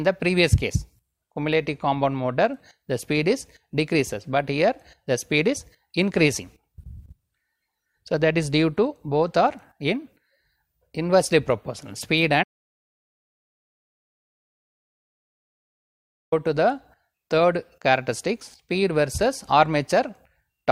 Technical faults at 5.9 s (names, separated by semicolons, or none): none